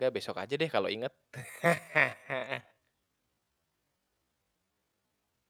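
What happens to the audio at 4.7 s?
At 4.7 s the audio is inside a time-stretched section that runs from 1.10 s, just after "besok aja deh kalo", to the end of the clip. The likely cause is software lengthening this stretch to fill a longer slot, playing it at about 0.55 times its original pace and keeping the pitch by repeating short slices. The result is speech that drags abruptly while staying at the same pitch.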